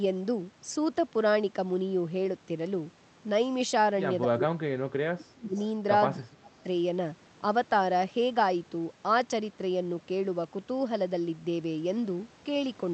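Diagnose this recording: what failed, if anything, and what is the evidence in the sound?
The speech gets suppressed in double talk twice, from 4.26 to 5.56 s and again from 6.14 to 6.66 s. Both times it ducks hard, by about 30 dB at its deepest, chopping out roughly a second of the first stretch and about a third of a second of the second. That's call processing, most likely the echo canceller seeing both sides talk at once, failing to tell its own talker from loudspeaker echo, and clamping down on everything.

Right at the tail of that first dip, from 5.54 to 5.68 s, there's a short echo leak: a faint delayed copy of the speech, about 30 dB under the main level and trailing it by 254 ms. Again it's call processing, with the likely source being a far end on speakerphone whose canceller let a scrap of its mic pickup slip back down the line. The whole thing sits on an Opus call path, and the top end stops around 8 kHz.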